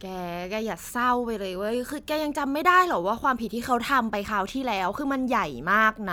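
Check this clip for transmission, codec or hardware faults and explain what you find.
I listened through and found nothing worth flagging here, as the speech holds together steadily the whole way.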